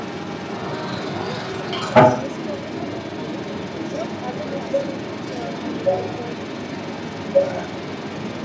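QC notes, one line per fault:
Throughout, other side's voice leaking through: a second voice comes through alongside the talker, about 5 dB louder than the main speech. Likely the far end playing from a loudspeaker, with the echo canceller not fully clearing it from the mic.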